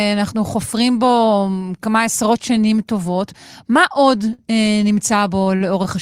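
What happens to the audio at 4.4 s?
A packet arrived late and the jitter buffer ran empty, causing a short stall from a late packet between 4.33 and 4.41 s. The receiver bridged the gap by stretching the last stretch of sound for about 53 ms, then resumed exactly where it had stopped once the packet turned up. No speech is lost, but the held sound lingers unnaturally, with a faint buzzy or dipped quality, and everything after it runs 53 ms later.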